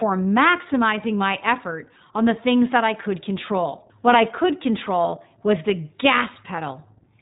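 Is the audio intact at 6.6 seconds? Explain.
No, not quite. Between 6.56 and 6.59 s there are lost iLBC frames. The gap is about 20 ms, which fits a single dropped 20 ms frame. The decoder covers the hole by repeating the last pitch cycle and blending in some noise, so you hear a brief held, slightly buzzy vowel-like smear rather than silence. Since iLBC frames decode independently, the speech snaps back to normal right after.

Underneath that, the whole clip is running through the iLBC codec, and it's plainly audible at 6.6 s too. It's narrowband, so nothing above 4 kHz survives, which gives it that boxed-in telephone quality. Each 20 ms frame is coded on its own, and at a rate that fits the 15.2 kbps mode the speech stays clear but comes out a bit rough and synthetic.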